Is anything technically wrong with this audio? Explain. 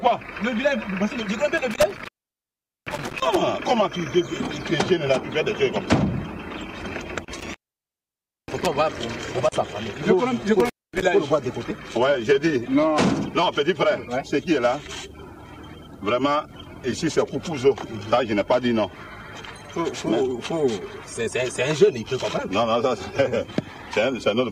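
Yes. Three times the sound drops out abruptly, with crackle at the edges and only faint hiss in the gap: from 1.58 to 3.36 s (silent for about 0.78 s), 7.38 to 8.67 s (about 0.92 s), and 10.6 to 11.03 s (about 0.24 s). This is an intermittent contact. A loose plug or cable briefly breaks the signal path. The crackle comes from the contact scraping as it opens and recloses.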